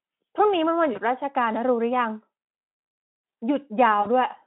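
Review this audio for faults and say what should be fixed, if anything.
Two brief patches where the sound smears into a buzzy tone or coloured noise that fades, at 0.93 to 1.00 s and again at 4.01 to 4.07 s, are VoIP packet loss concealed by the speech codec. Packets went missing, and the Speex decoder filled each gap by extending its last pitch and filter while lowering the gain. The gaps of about 20 ms and 40 ms fit one and then two lost frames, and the output stays weak or distorted just after each. The narrowband line, 150 to 3400 Hz, shows little or no codec damage around them. Adding jitter buffering and forward error correction on the network path would prevent these dropouts.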